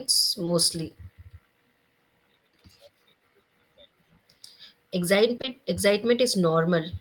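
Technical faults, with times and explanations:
0.45–0.49 s: short concealed packet loss. About 20 ms of speech never arrived in time. The receiver stretched the preceding sound over the gap, leaving a brief smear.
5.37–5.49 s: short concealed packet loss, three in a row. Three consecutive 20 ms gaps were filled by extending earlier sound, so the smear lasts longer and wobbles before real speech resumes.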